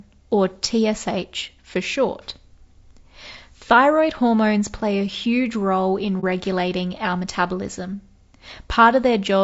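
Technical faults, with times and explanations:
throughout: low-delay AAC compression. The speech is plainly rough and grainy, with a hiss filling the gaps between pitch harmonics and a top band that sounds thinned or synthetic. The likely cause is AAC-ELD, the low-delay AAC used for calls, at a rate that fits roughly 32 kbps. Its short frames separate harmonics poorly and spend bits inefficiently.
6.20–6.24 s: AAC frame loss with muting. Right after "a huge role in", the sound drops into a brief silence of about 30 ms, consistent with about one coded frame going missing. The decoder zeroed that frame's spectrum, and the overlapping transform windows turn the gap into a quick fade out and back in rather than a hard cut. That soft-edged hole sets it apart from a sample-level dropout, which would stop and restart abruptly.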